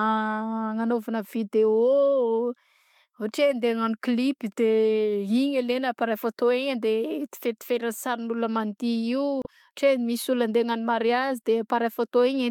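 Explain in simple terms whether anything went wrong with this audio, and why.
At about 9.42 to 9.46 seconds the speech is briefly broken up. This is damaged data in a compressed stream: a small stretch of the file was corrupted, so the decoder misread it and briefly lost its place before locking back on.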